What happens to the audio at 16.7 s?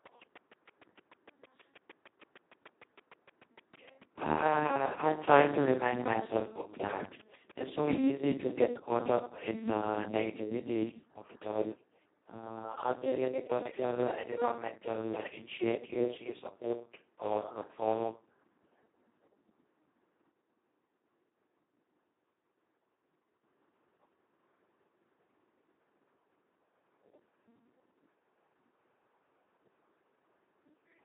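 Speex codec damage runs through the whole clip, including 16.7 s. Starved of bits, fitting about 2 kbps, the CELP excitation leaves the speech hoarse and robotic, with nothing above 3.8 kHz.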